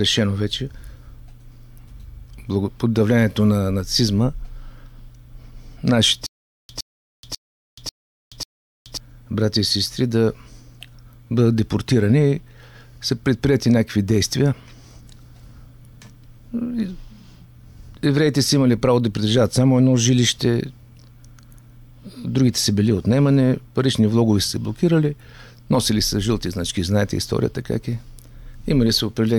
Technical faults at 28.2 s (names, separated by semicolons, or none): none